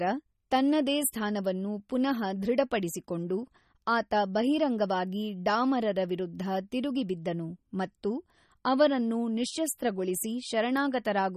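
Throughout the recording, the speech has a watery, swirling quality, with a metallic chirp on s sounds and softened consonant onsets. Nothing is present above 14.6 kHz, so the top end stops abruptly. The likely cause is MP3 compression at a low bitrate, consistent with about 32 kbps. Starved of bits, the encoder removes the treble at a fixed cut-off and zeroes faint frequency lines that flicker on and off between frames.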